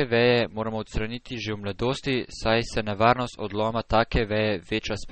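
From start to finish the speech has a watery, swirling texture. The top end is missing above a fixed cut-off. Sibilants chirp with a metallic edge, and consonant onsets sound smeared. The likely cause is MP3 compression at a starved bitrate, which fits about 32 kbps. Short of bits, the encoder drops the treble outright and zeroes quieter frequency lines. Those lines flicker on and off between frames. That flicker makes the swirl.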